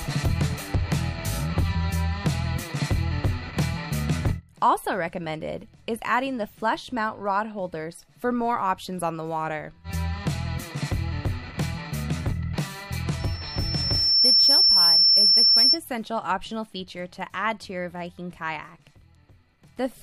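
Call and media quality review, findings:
Loudspeaker feedback squeal, 13.19–15.79 s: a pure tone near 5.4 kHz swells over about a second to roughly 10 dB above the programme. Mic picking up its own loudspeaker; loop gain above unity at that frequency, self-sustaining until the loop breaks.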